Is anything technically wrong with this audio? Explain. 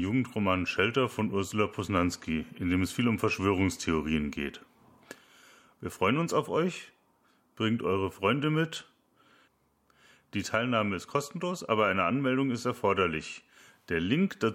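No, nothing stood out as technically wrong on listening to this speech recording.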